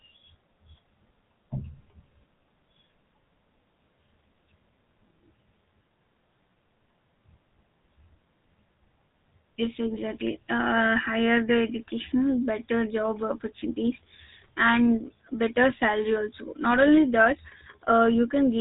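Speech running through a GSM full-rate codec the whole way through, and the damage is plainly audible. Everything above about 3.8 kHz is simply gone, so the sound is boxed into a narrow phone band. On top of that there's the gravelly, buzzy roughness you get when the codec models the vocal tract and drives it with a sparse, regularly spaced pulse excitation. The overall character fits the 13 kbps full-rate mode.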